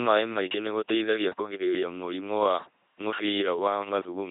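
Speech passed through an LPC-10 vocoder at 2.4 kbit/s throughout, each moment resynthesised as pure buzz or pure hiss, giving a heavily damaged, mechanical robot voice with nothing above 3.8 kHz.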